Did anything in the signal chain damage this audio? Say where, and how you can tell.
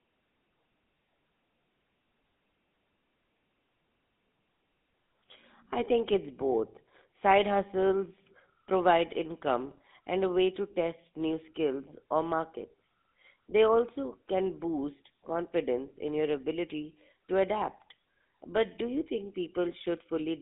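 Yes. The codec stage applied GSM full-rate coding throughout. Sound sits within 150 Hz to 3.7 kHz, with the buzzy, gravelly roughness of pulse-driven vocal-tract modelling.

GSM bit errors struck on the radio link from 9.70 to 9.79 s. A brief squawking, gargling burst shows corrupted decoder parameters, which fits about five damaged frames.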